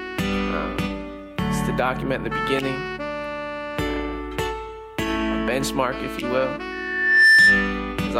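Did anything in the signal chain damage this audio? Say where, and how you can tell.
Yes. A loudspeaker feedback squeal enters in the analogue acoustic path from 6.72 to 7.84 s: a pure 1.8 kHz tone swells over about half a second to roughly 15 dB above the music. A spectrogram shows one bright horizontal line; the waveform shows a growing sinusoidal envelope. The microphone re-captured its own loudspeaker, and loop gain exceeded one at that frequency.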